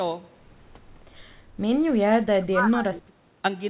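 From 2.04 to 3.1 s the speech dips, by about 30 dB at its deepest, for roughly a second in all. That's likely speech suppressed in double talk: with both sides talking, the echo canceller couldn't pull the talker apart from the loudspeaker echo, so it turned both down. The whole clip sits below 4 kHz, which fits a narrowband G.711 mu-law call path.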